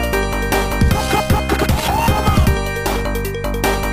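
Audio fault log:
Nothing stood out on listening.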